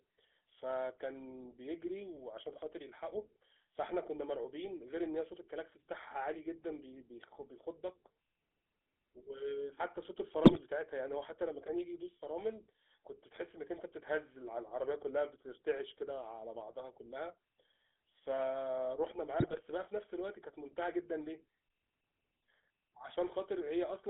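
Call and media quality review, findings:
GSM full-rate codec, throughout: buzzy, gravelly voicing, band limited to 250 Hz–3.5 kHz, which fits a 13 kbps full-rate stream. Coarse pulse excitation, not the smoother muffling of AMR.

GSM bit errors, 10.44–10.61 s and 19.40–19.61 s: squawking, gargled bursts from corrupted filter, pitch and gain values. Distorted sound rather than the silence or repetition of packet loss.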